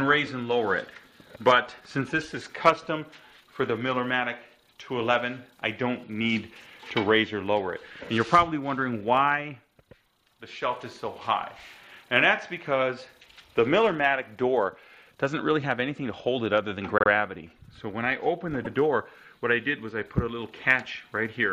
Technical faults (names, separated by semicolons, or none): repeated frames